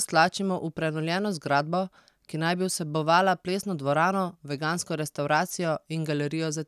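No technical faults can be heard anywhere in the speech recording, which stays continuous and intact across its whole duration.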